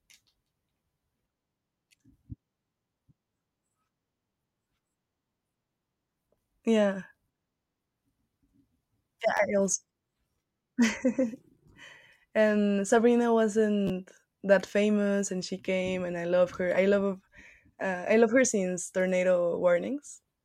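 Repeated buffers at 9.37–9.39 s and 13.87–13.90 s, just before "that famous and she": late audio made a segment of about 11.6 ms, consistent with a 512-sample buffer, replay twice, giving a brief buzzy stutter and losing around 20 ms.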